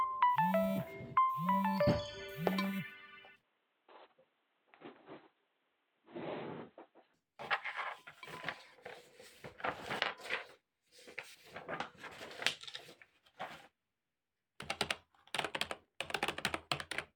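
Input switched to a poorer device, from 3.43 to 7.14 s: the sound turns dull and boxy, with nothing above 4.1 kHz, a small level jump, and a faint new noise floor, with no gap at the change. Likely, capture moved to a narrower-band microphone before returning.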